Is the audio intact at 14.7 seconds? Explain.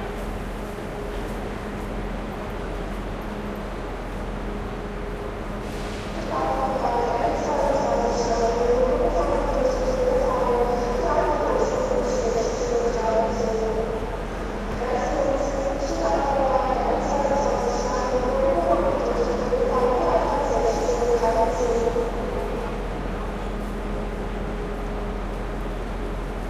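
No. From 14.72 to 14.75 s, the chunks are out of order: one block of about 11.6 ms was written one chunk late and plays after the block that should follow it. Nothing is missing, but the swapped order and three hard joins produce a brief jumbled flicker.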